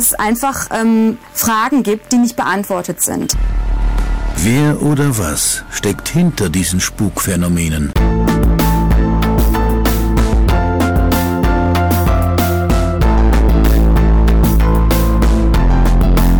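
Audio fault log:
Throughout, hard clipping: the signal is pushed about 13 dB past what the stage can carry, so roughly a fifth of all samples hit the ceiling and are sliced flat. With overload this heavy, every loud passage turns into a harsh, buzzing fuzz rather than occasional crackle. On the waveform the peaks form flat plateaus. The spectrogram shows dense harmonic energy smeared up to the top of the band wherever the level is high.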